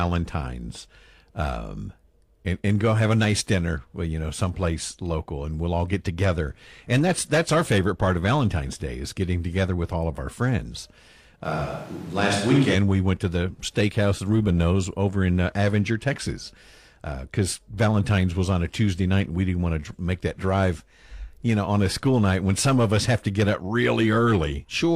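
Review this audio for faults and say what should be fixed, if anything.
From 11.46 to 12.74 s the speech suddenly goes roomy and hollow, thinner in the low end, with background noise about 25 dB under it, then snaps back, though the level barely shifts. That points to a switch to a distant microphone, likely the close mic dropping out. Worth checking the close mic's cable and connection, and keeping a second close mic as backup.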